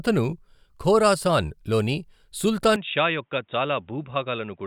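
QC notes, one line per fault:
2.76 to 4.67 s, input switched to a poorer device: speech turns dull and narrow, nothing above 3.8 kHz, about 5 dB quieter, faint new background noise, likely a change to a lower-grade microphone.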